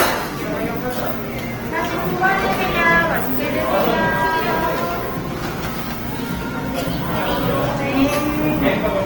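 From start to finish, the everyday sound carries the smeared, watery texture of a very low-bitrate encoding, likely low-bitrate audio saved at a high bitrate. The second, high-bitrate MP3 pass cannot restore the detail lost earlier. On a spectrogram, nothing appears above 20.2 kHz.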